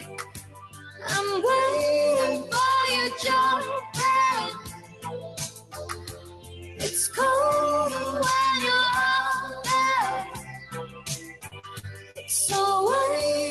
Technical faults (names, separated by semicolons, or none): noise suppressor applied to music or sounds; sound cut by the noise suppressor; repeated packet loss (robotic sound)